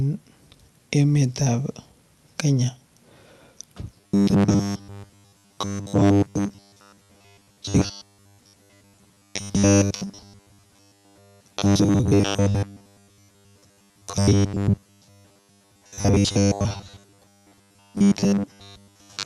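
From 3.98 s to the end at 19.25 s, the speech takes on a rigid, metallic buzz pitched at 100 Hz, still loosely tracking the syllables. This is robotic sound from repeated short buffers, likely caused by audio arriving too infrequently so that playback keeps looping the last 10 ms chunk. A 10 ms loop forces the 100 Hz tone. Looped material appears to fill most of the signal, with only fragments of real audio surviving between repeats.

At 7.81 s, inside that robotic stretch, playback jumps forward with no audible gap. This is a skip ahead: roughly 0.7 s of audio was dropped while later audio was already queued, so the sound before and after the cut is spliced almost directly. The result is an abrupt discontinuity in the flow, with the overall delay shortening by about the same amount. The call path's band limit, with the top end stopping near 12 kHz, sits underneath both faults.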